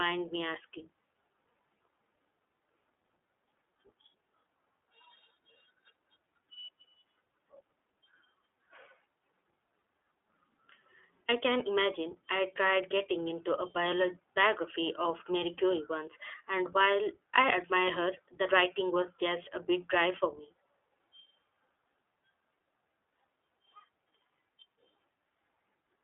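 iLBC codec coloration runs through the whole speech clip, from start to finish. Nothing above about 3.8 kHz survives, and the usable band sits roughly between 300 Hz and 3.5 kHz, giving a thin telephone quality. Each 20 ms frame's excitation is coded on its own, without drawing on the previous frame, so the speech is plainly rough and synthetic, which fits the codec's 15.2 kbps mode.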